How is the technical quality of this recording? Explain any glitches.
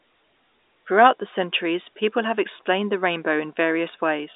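There's nothing here that counts as a glitch: the speech just has the narrow, slightly boxy character of an ordinary G.711 phone line, with nothing above about 3.8 kHz, which is simply how that telephone format carries sound.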